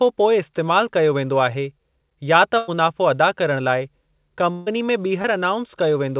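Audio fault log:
2.58–2.70 s and 4.52–4.71 s, burst of packet loss: about 100 ms and 140 ms of audio never arrived, so the receiver stretched the last sound into a decaying buzz or hiss before resuming further on. On a spectrogram, frozen harmonics or smeared noise fade out, then real detail returns abruptly.
5.22–5.26 s, short concealed packet loss: roughly 20 ms went missing and was patched by continuing the preceding sound, heard as a brief smear or wobble. The waveform shows a short, overly regular stretch, and the spectrogram a blurred sliver below the call path's 4 kHz ceiling.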